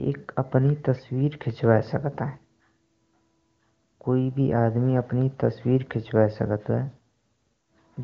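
No technical faults can be heard in this speech.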